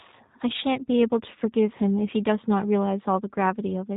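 From start to finish the speech passes through a G.729 codec, a low-rate voice coder whose roughness fits an 8 kbit/s setting. Rather than sending the waveform, it models each short frame as a vocal tract filter fed by a pitch predictor and a few pulses, so the speech comes out plainly rough and slightly synthetic, with nothing above 3.8 kHz. A simple band limit would sound muffled but clean. The buzzy, rebuilt texture is what marks this as a speech coder.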